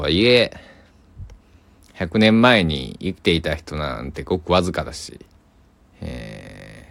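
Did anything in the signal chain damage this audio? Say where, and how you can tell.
No, nothing in the signal chain damaged this audio.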